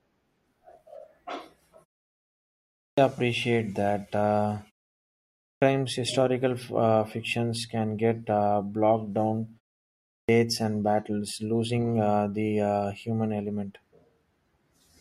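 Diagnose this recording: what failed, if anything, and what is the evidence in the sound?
Playback output is the problem here, a clipped start after a pause. Speech comes back abruptly at 2.65, 5.32 and 9.96 s, missing about 0.3 s of its onset each time. The device sleeps through the pauses and swallows the first sounds while waking.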